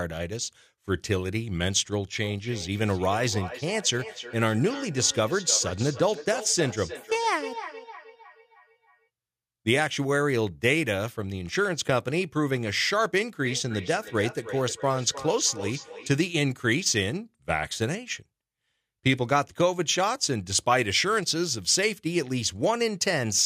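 Two devices in the same room are joined to one call, so the speech played by one is picked up again by the other's microphone, and neither echo canceller removes audio it did not play itself. The result is feedback echo between two devices, from 2.21 to 9.09 s and again from 13.38 to 16.2 s. Each phrase returns roughly every third of a second, thinner and ringing, peaking about 12 to 13 dB below the speech.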